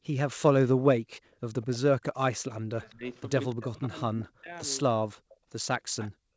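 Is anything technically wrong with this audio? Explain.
Yes. The speech is suppressed in double talk, and there is echo leak.

Speech suppressed in double talk occurs at 1.62–1.82 s, 2.68–3.04 s, 3.53–3.95 s and 4.14–4.51 s. In each case the speech sinks sharply, by roughly 30 to 40 dB at its deepest, for a few tenths of a second and then recovers. This is likely an echo canceller that heard both sides at once and turned everything down. Unlike a network dropout, the level is turned down by processing rather than lost in transit.

Echo leak occurs at 3.50–3.65 s, 5.29–5.37 s and 5.99–6.11 s. Brief, faint copies of the speech trail the original by about 204 ms. The first two sit about 30 dB below the speech, and the last is louder, about 20 dB below. These are likely residue that a far-end loudspeaker echo canceller failed to remove. The fixed delay and the weak copies set this apart from room reverberation, which decays smoothly and has no single lag.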